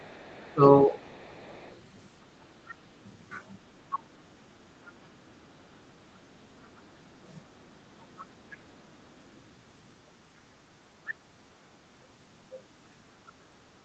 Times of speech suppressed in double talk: 0.53-0.95

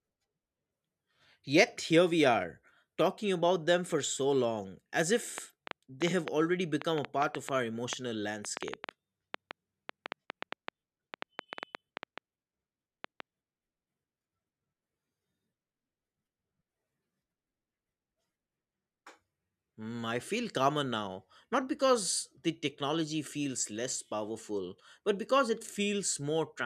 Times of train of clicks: 5.38-13.21

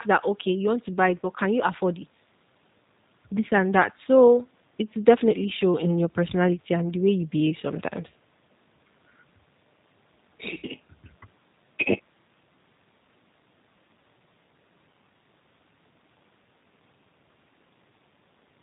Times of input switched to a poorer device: none

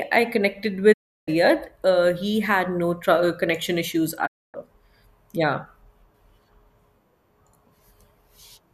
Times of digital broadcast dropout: 0.92-1.29, 4.25-4.56

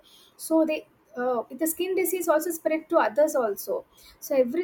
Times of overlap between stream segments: 2.24

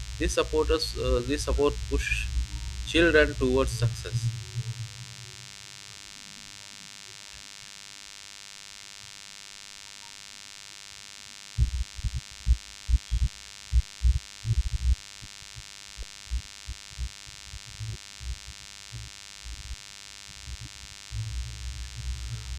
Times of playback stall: none

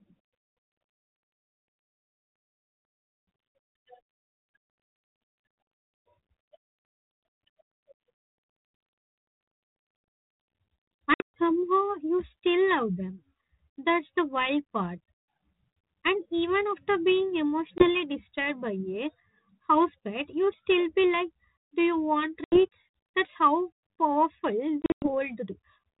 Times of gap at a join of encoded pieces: none

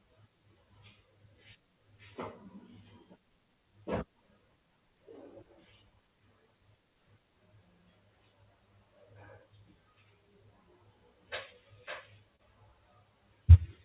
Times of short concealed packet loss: 12.36-12.41

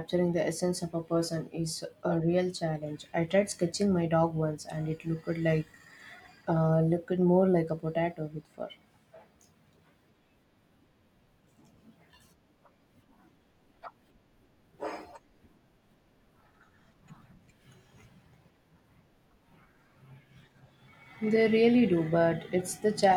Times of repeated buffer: none

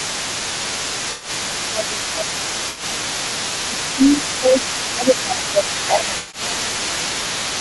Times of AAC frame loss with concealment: 1.11-1.29, 2.69-2.83, 6.17-6.41

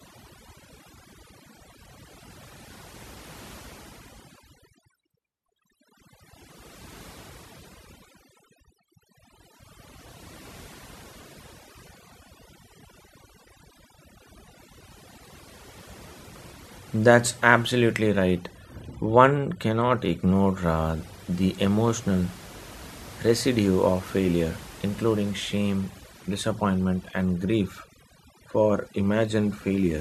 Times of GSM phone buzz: none

